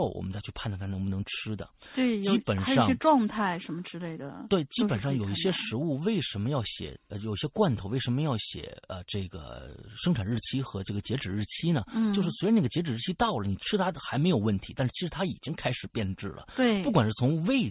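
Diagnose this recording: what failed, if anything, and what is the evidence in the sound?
Nothing failed: the recording shows no fault, and there is no evidence of one in the sound.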